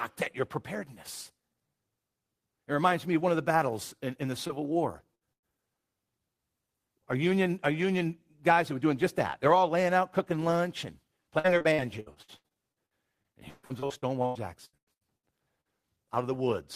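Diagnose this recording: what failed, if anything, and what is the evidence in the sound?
The network path failed in three related ways, and each shows up as concealment by the receiver's decoder. The first is short concealed packet loss at 4.47 to 4.51 s, just after "battles in in the", and again at 15.61 to 15.67 s. About 20 ms and 40 ms of audio never arrived in time. The decoder extended the preceding sound to bridge each hole, leaving a brief smear or wobble where the real signal should be.

There are also two bursts of packet loss close together. The first runs 5.15 to 5.23 s and drops about 60 ms. The second runs 5.33 to 5.45 s and drops about 100 ms. These gaps are long enough that the concealment stretches the last sound into a held buzz or fading hiss. Playback then resumes further along, so the material inside each gap is simply missing rather than delayed.

The most damaging stretch is repeated packet loss, producing robotic sound from 11.39 to 15.25 s, starting right after "out cooking lunch and". 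Around two dozen separate gaps fall in under four seconds, together about 1.24 s of lost audio. Roughly a third of that span is synthesized fill, and the longest single gap is about 150 ms. Patch after patch gives the choppy texture typical of sustained network loss with pieces of the sound absent.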